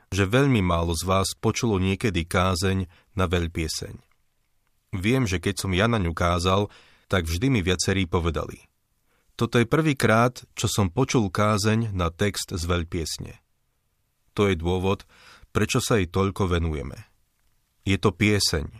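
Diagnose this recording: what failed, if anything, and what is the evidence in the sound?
Nothing in the recording stood out as a failure on listening, so there is no faulty stage to point to.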